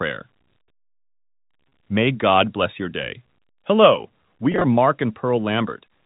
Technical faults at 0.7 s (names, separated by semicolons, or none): none